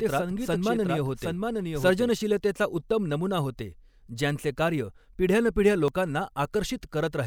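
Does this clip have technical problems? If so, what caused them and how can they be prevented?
Yes. A doubled audio track runs from the start of the clip to 2.1 s. A second full-band copy of the speech trails the original by roughly 0.7 s, about 5 dB quieter. It carries no added room sound or decay, and it stops abruptly at 2.1 s. It is likely that the same audio was captured twice, once through a slower path, or that an edit left two copies out of step. To prevent it, monitor or record each source through one path only.

Audio missing between chunks causes two short skips, at 2.91 s and 5.88 s. The first falls just before "नमुना होते ज्यांचे कार्य". Each loses roughly 20 ms, and the two sides are butted together with no gap. The skips sit about 3 s apart, which likely points to a process that handles audio in 3-second blocks and drops a sliver at each handover. To prevent it, use a recorder or processor that overlaps or buffers across block boundaries.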